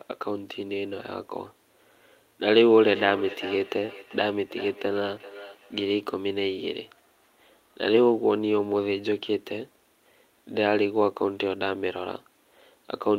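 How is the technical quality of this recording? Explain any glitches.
The recording has one clear fault, a feedback echo between two devices, from 2.78 to 5.92 s. Each stretch of speech returns at a fixed spacing of roughly 400 ms, peaking about 15 dB below the direct speech. Two devices on the same call share the room: one plays back what the other's microphone sent, and that microphone captures it again. Each device's echo canceller removes only its own playback, so this loop passes through and is heard as delayed, ringing copies.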